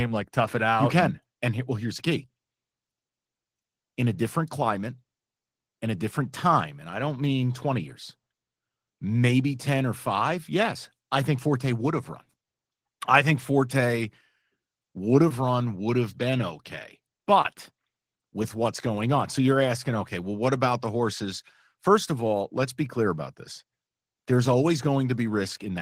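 Speech, with Opus voice compression audible throughout: the voice sounds hoarse and faintly robotic, which fits a low bitrate around 16 kbps in hybrid mode. On a spectrogram, sparse, smeared energy above 8 kHz sits over blurred harmonics, in blocks that suggest 20 ms frames.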